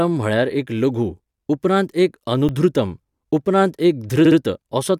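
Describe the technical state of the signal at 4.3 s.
Right at 4.3 s you're in the middle of a repeated-frames fault running from about 4.24 to 4.37 s. A 64 ms chunk of the compressed speech got delivered more than once, so the decoder plays that same slice two extra times back to back. You hear it as a quick stutter in the speech. It also stretches the audio by 128 ms.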